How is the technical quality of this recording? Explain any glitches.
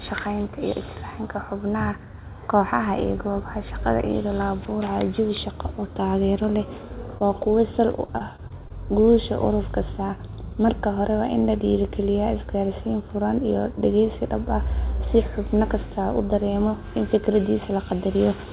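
The recording has two packet-loss glitches, and the sound is band-limited to a narrow telephone range with nothing above 4 kHz, which fits G.711 mu-law at 64 kbps.

Short concealed packet loss, 7.18 to 7.22 s: about 20 ms of audio arrived too late, so the receiver continued the previous sound and blended back in, leaving a brief smear.

Repeated packet loss (robotic sound), 8.06 to 9.12 s: seven short gaps, the longest 24 ms, were each patched in turn, covering about 11% of that stretch and making the speech choppy and robotic.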